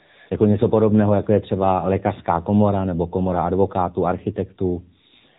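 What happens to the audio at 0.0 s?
From 0.0 to 0.3 s the clip carries AMR comfort noise. The phone treated the opening as silence and sent no speech frames, so the receiver filled the gap with synthetic noise built from a coarse level and spectrum estimate. It sounds like a smooth, steady hiss that switches off abruptly when speech begins.

The AMR narrowband mobile codec also applies at this point, as it does throughout. Nothing above 4 kHz passes, and the pulse-driven vocal-tract model gives the audio a plainly buzzy, synthetic character, which fits a low bitrate of about 7.4 kbps.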